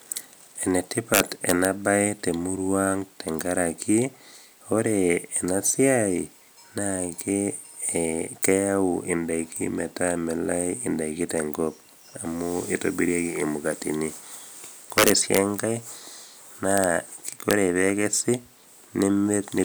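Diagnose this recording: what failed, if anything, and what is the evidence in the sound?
A fixed-point gain or sample-format stage wrapped instead of saturating. This integer overflow flips peaks about 1 to 6 dB past full scale to the opposite sign, causing violent cracks at 1.14–1.65, 14.98–15.38, 16.78–16.84 and 17.51–17.53 s.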